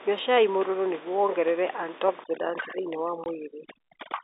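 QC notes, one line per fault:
3.24–3.26 s, packet loss filled with silence: a 20 ms hole where even the room noise drops out, with hard edges, which fits one lost packet replaced by zeros rather than concealed.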